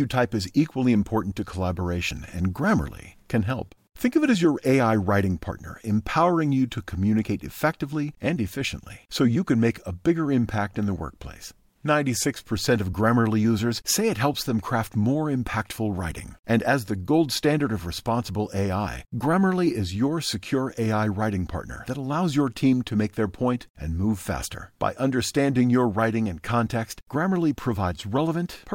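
No technical faults turn up anywhere in this speech clip, so there's nothing to flag on a listen.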